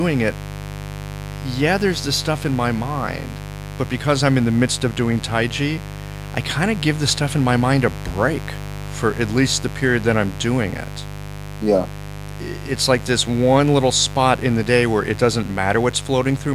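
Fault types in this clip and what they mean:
Mains buzz: a steady, raspy buzz tied to the 50 Hz supply runs under the speech for the whole clip, sitting only about 10 dB below it. Sharp switching spikes enter the signal path twice per mains cycle, so the buzz repeats at 100 Hz and carries a dense series of harmonics reaching well into the kilohertz range. That bright, edgy texture is what separates it from plain mains hum, which is a smooth, low tone.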